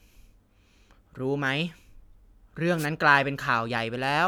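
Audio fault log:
2.77–2.87 s, wireless microphone noise hit: a brief swish of static washes over the speech for about 0.1 s as the FM radio link fades and receiver hiss rises. Unlike a digital dropout, the sound is masked by noise rather than cut to silence.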